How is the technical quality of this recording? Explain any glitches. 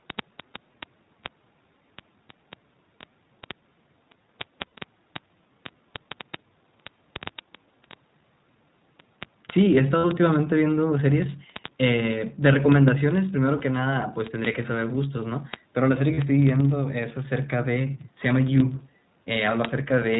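The technical quality is poor: the speech is coded at narrowband, there is a steady tick running through it, and there are four short concealed dropouts.

The iLBC codec is audible throughout. Nothing passes above 4 kHz, which fits the 15.2 kbps, 20 ms frame mode. The speech sounds rough and synthetic rather than simply muffled like a low-pass filter.

Word clock ticks run from 0.1 s to the end, about fifty per second. They come from a receiver clock drifting roughly a tenth of a percent from the sender's. A single sample slips each time, giving sharp regular ticks of uneven strength, unlike random crackle.

Lost iLBC frames occur at 4.67 s (60 ms), 9.98–10.06 s (60 ms), 13.58–13.62 s (20 ms) and 16.14–16.19 s (40 ms). The decoder repeats the last pitch cycle, so each gap sounds like a held buzzy vowel instead of silence. The speech then recovers almost at once.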